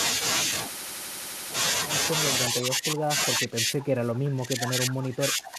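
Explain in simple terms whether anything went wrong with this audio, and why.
Something did go wrong, twice. From 2.5 to 3.18 seconds, the speech sinks and thins out. It happens again from 3.35 seconds to the end of the clip, more deeply. This is speech suppressed in double talk. The likely cause is that the other side spoke at the same moment. The echo canceller then mistook this talker for its own loudspeaker echo, and turned the speech down in patches, for about two and a half seconds in all.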